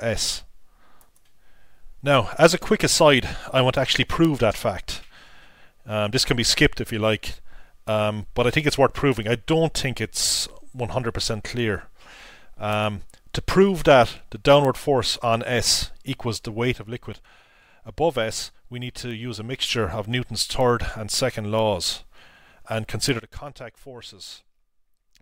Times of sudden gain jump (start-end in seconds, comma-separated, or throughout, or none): 16.72-19.62, 23.20-25.22